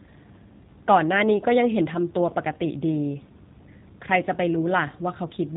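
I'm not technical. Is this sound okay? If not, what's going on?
No. The whole clip has been squeezed through a G.729 codec, a phone-call compression method. It rebuilds speech from a simple model, so it sounds plainly rough and slightly synthetic. Nothing above 3.8 kHz remains, giving a thin, telephone-like sound.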